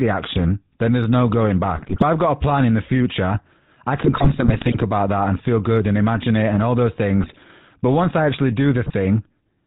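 Speech encoded with the GSM full-rate codec throughout, whose coarse sound fits 13 kbps coding, loses everything above 4 kHz and rebuilds the voice from a thinned, pulse-driven excitation, so it comes out buzzy and gravelly. GSM bit errors then corrupt the decoder's filter, pitch and gain data, breaking the speech into squawks, pops and gargling at 1.76–2.03 s (after "then there's no going", before "I've got"), 3.94–4.86 s (after "future I", before "that and feel good"), 7.23–7.37 s and 8.84–8.95 s (after "once I actually").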